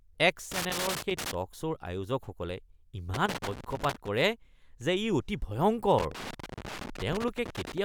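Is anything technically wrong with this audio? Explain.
Yes. Loose connector crackle breaks through this speech three times: from 0.52 to 1.34 s, from 3.14 to 4.08 s, and from 5.98 to 7.78 s. A worn or dirty contact intermittently opens and closes as it shifts, chopping the signal on and off, and any DC on the line adds pops. The result is ragged bursts of scratching that start and stop in clumps. Vinyl crackle, by contrast, persists throughout.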